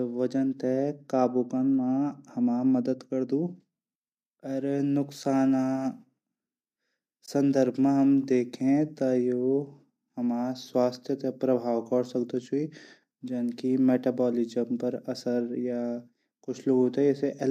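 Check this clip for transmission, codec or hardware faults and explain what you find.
There's one real fault in this speech clip: a short dropout at 7.26 to 7.28 s, an AAC frame loss with muting. About 20 ms of audio goes missing, which fits two lost frames of roughly 10 ms each. The decoder zeroes the spectrum for those frames, and the overlapping windows fade the sound out and back in. You hear a brief soft-edged hole. Underneath that there's a faint roughness, likely from low-delay AAC coding, but it's light.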